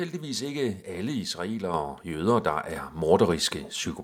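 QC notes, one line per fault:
1.74 s and 2.76 s: microphone volume stepped up. The input level jumps abruptly by about 6 dB, then by about 4 dB. Speech and background noise rise together because the microphone's input volume was raised in steps.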